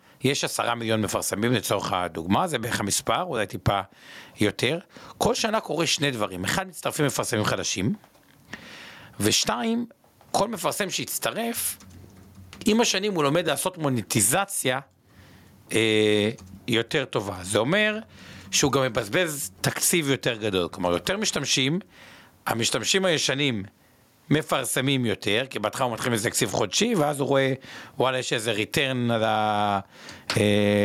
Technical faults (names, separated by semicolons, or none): gain pumping